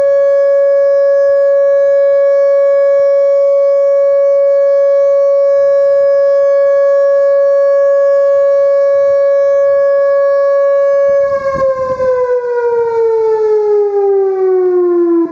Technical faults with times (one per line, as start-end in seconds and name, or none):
0.00-15.31 channel delay (comb filtering)
0.00-15.31 gain pumping